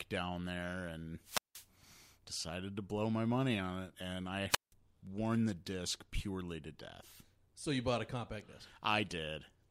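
Wireless microphone squelch dropout occurs at 1.23 to 1.68 s and again at 4.49 to 4.73 s. Each time the FM radio link fades, hiss rises, and the receiver's squelch mutes the speech for about 176 ms and 174 ms before it returns.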